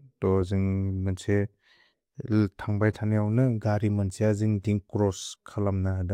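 Speech recording: no audible faults.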